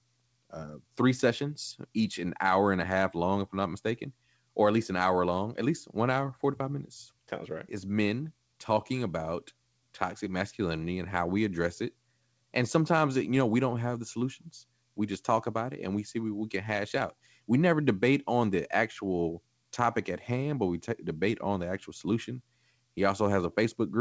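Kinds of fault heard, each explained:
No faults can be heard in this speech audio.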